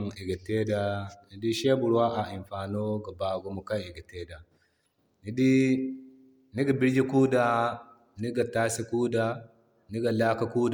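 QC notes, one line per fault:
Throughout: generation loss, the speech is swirly, smeared and hollow with blurred attacks, yet its bandwidth extends to 20.1 kHz. A single low-bitrate pass would lose top end first, so this likely comes from about five stacked MP3 passes near 130 kbit/s.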